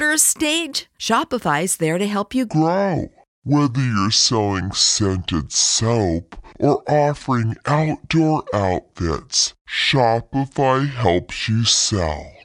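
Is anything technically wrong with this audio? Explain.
Yes. From 2.49 s, right after "there to help you", to the end, a section at the wrong speed plays at 0.62 times its recorded rate, likely from a clock or sample-rate mismatch. Pitch and tempo drop together by roughly seven semitones, making the speech deep and dragging.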